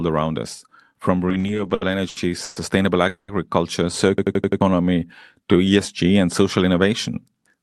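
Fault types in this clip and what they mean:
Repeated stalls (stutter): Packets kept arriving late, so the jitter buffer emptied again and again and the receiver stretched the last sound to cover each wait. Between 1.29 and 2.58 s the speech stumbles through twelve small stalls, the longest 120 ms, with about 350 ms of filler making up roughly a quarter of that stretch. Nothing is lost, but the phrase drags and stutters forward.
Call audio freeze: Packets were likely held up in transit, leaving the jitter buffer dry while the receiver continued the last sound and let it fade. From 3.08 to 3.30 s a 200 ms pause is wedged into the speech, ending in about 70 ms of silence before the audio resumes where it stopped. The added delay of 200 ms means the rest of the clip arrives later, with nothing missing.
Jitter buffer slow-down: With its reserve running low, the buffer rebuilt it by repeating single pitch periods and slivers of pauses many times over. 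From 4.07 to 5.70 s the speech plays at about 89% speed while keeping its pitch, so sounds are drawn out, adding 192 ms overall. The system hang loop sits inside this stretch.
System hang loop: The computer or driver stalled while the sound hardware kept replaying the same ring buffer. From 4.18 to 4.61 s one 85 ms piece of audio repeats five times at 11.7 Hz, a machine-gun stutter, which fits a 4096-sample buffer. Around 400 ms of the real speech underneath is lost, so the audio jumps ahead when the loop releases.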